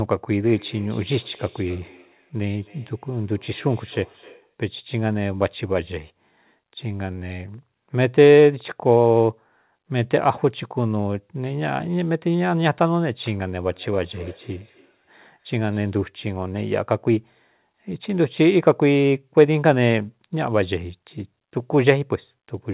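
Speech, heard through a call path with nothing above 4 kHz, consistent with G.711, carries feedback echo between two devices from 0.44 to 4.55 s and from 13.71 to 15.95 s. A second device's playback is re-captured, beyond the reach of either echo canceller. Each word returns about every 300 ms at up to about -24 dB. On a spectrogram these returns appear as faint, evenly spaced copies of each syllable.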